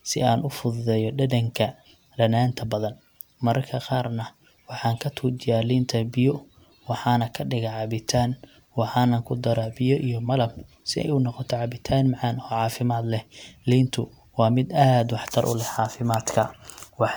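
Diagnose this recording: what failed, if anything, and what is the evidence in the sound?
The fault sits at the codec stage: this speech has most likely been through repeated lossy encoding, generation loss from decoding and re-encoding MP3 about four times, which fits a 128 kbit/s setting. Each pass requantised the audio on a shifted frame grid, so the artefacts stacked up across the whole recording. The result sounds swirly and hollow, with smeared consonant attacks and a watery texture beyond what one encode at that rate would leave, while the spectrum still extends to about 20.1 kHz.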